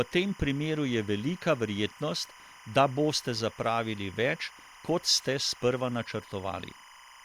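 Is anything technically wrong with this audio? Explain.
Yes, timecode bleed runs throughout the whole speech clip. Linear timecode from an adjacent track or cable has coupled into the audio path, and its square wave, flipping between roughly 1 and 2 kHz to encode data at 25 frames per second, sits around 25 dB below the speech. The result is a constant, chattering warble behind the speech.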